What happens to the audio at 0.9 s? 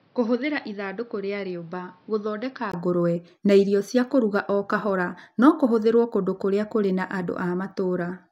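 From the start to 2.74 s the sound is dull and boxy, cut off above 5.9 kHz and roughly 10 dB quieter with added background noise, likely from the input switching to a poorer device.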